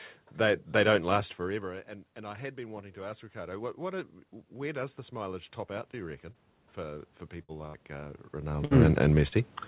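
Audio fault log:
1.12–9.07 s, automatic gain rising: the level control sensed about 17 dB less input and slowly added about 13 dB, swelling speech and room noise together.
6.32 s and 9.28 s, short concealed packet loss: about 30 ms never arrived in time each time; the receiver extended the previous sound, leaving a brief smear or wobble.
7.42 s, 7.67 s and 8.65 s, burst of packet loss: about 60 ms of consecutive audio was lost each time; the receiver held and faded the last sound into a buzz or hiss, then resumed further on.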